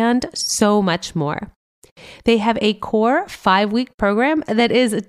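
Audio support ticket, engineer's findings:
No audible faults found on listening; no action required.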